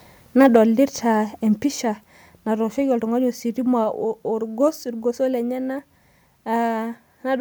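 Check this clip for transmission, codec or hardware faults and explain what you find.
Two kinds of fault are audible, both at the microphone end.

From 0.39 to 0.56 s the loudest syllables turn harsh and crackly, with peaks running about 3 dB past the converter's limit. That is likely microphone overload. The waveform shows flattened tops on a few percent of samples, and broadband splatter smears across the spectrogram.

At 0.56 s and again at 1.56 s the whole signal drops in level, by about 2 dB and then about 4 dB, which likely means the microphone volume was stepped down by software. On the waveform each drop is a sudden, abrupt shrink in the envelope, and the spectrogram dims uniformly at both points.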